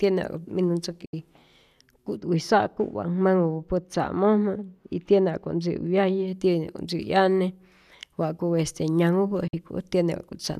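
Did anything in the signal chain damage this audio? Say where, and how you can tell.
Yes. At the broadcast receiver, digital broadcast dropout mutes the speech twice: from 1.05 to 1.14 s, a 72 ms hole, and from 9.47 to 9.54 s, a 48 ms hole. Each hole begins with a brief fade of about 8 ms, so there is no click. The receiver lost frames or rejected them on checksum and held silence until valid data returned. Both gap lengths fit a handful of roughly 24 ms frames. On the waveform these appear as flat silent stretches with short tapered edges, and on a spectrogram as clean full-height vertical blank bands.

Between 2.17 and 6.28 s, de-emphasis is applied wrongly somewhere in the receive or playback processing. A treble-cut stage meant to reverse pre-emphasis acted on audio that had none, or acted twice, tilting the response smoothly downward to about 14 dB below the 1 kHz level at 10 kHz. 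The speech turns dull and muffled, with softened sibilants, then brightens again after 6.28 s. On a spectrogram the upper region visibly dims across that span with a gradual slope, not a sharp cutoff line.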